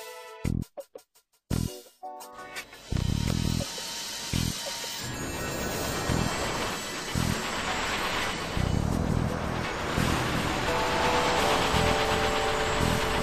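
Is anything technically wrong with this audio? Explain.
Yes. From 8.12 s to the end, a doubled audio track appears: a second full-band copy trails about 400 ms behind, roughly 5 dB quieter, with no decay or room colour and an abrupt start, likely from a slower second capture path. The waveform and spectrogram show every onset repeated at that fixed offset.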